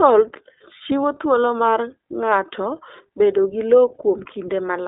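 Throughout, the speech carries iLBC codec damage: each 20 ms frame's excitation is coded on its own, leaving a plainly rough, slightly synthetic texture consistent with the 15.2 kbps mode. A spectrogram shows energy confined to 300 Hz to 3.7 kHz, with nothing above 3.8 kHz.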